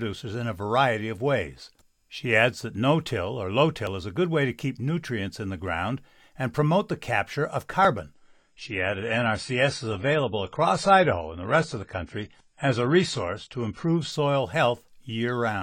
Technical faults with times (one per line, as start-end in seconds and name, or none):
3.87 audio missing between chunks
7.85 audio missing between chunks
8.14-14.11 adaptive stream at a lower bitrate
11.82 audio missing between chunks